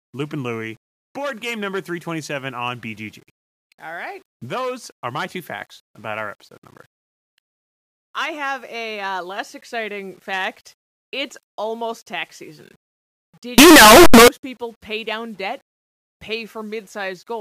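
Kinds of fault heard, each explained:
Signed and unsigned mixed up: from 13.58 to 14.28 s, just before "people pay down debt", the speech bursts into loud, harsh distortion where even quiet moments sound as loud as strong ones, likely from 8-bit samples read with the wrong sign convention. The waveform shows a near-solid block swinging across the whole range, and the spectrogram a broadband smear.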